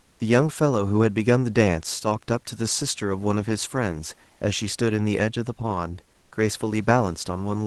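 Comfort noise in place of the background appears from 0.00 to 0.19 s and again from 6.19 to 6.31 s in this speech recording. In both gaps the room's own background, sitting about 42 dB below the speech, gives way to a smooth, detail-free hiss roughly 1 to 2 dB quieter. This is likely discontinuous transmission in an Opus call, where the sender pauses during silence and the receiver synthesises stand-in noise. The top end stops near 12 kHz.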